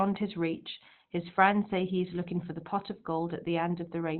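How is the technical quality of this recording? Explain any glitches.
The speech is plainly degraded by what is likely Opus compression throughout: narrowband, muffled and hoarse, fitting Opus's SILK speech mode at a low rate near 16 kbps, not MP3's swirling holes.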